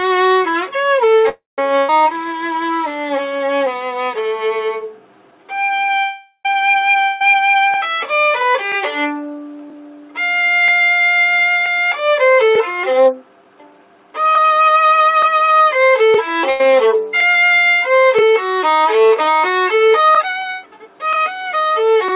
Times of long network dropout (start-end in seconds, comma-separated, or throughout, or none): 7.03-7.21